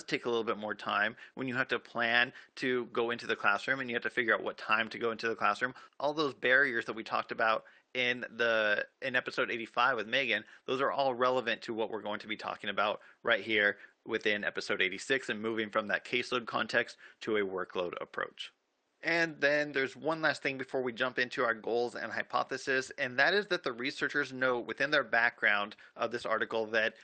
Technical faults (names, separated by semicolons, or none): lost packet rebuilt from error correction